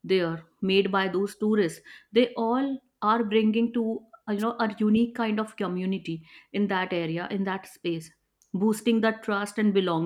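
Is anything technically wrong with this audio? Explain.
Yes. At 4.38 to 4.43 s there is a short swish of static over the speech: a wireless microphone noise hit. The analogue FM radio link faded as reflected signals cancelled, so receiver noise rose for about 50 ms.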